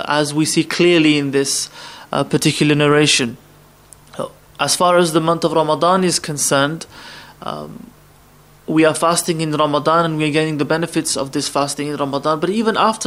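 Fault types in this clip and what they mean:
No faults can be heard anywhere in this audio.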